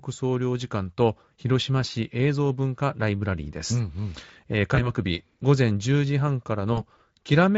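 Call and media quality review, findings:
Speech dropouts at 4.75–4.93 s and 6.73–6.82 s. Brief buzzy, smeared stretches that fade, with weak sound lingering after. VoIP packet loss concealed by the speech codec: the Speex decoder extrapolates its last pitch and filter across gaps of 20 ms and 40 ms, fitting one and two lost frames.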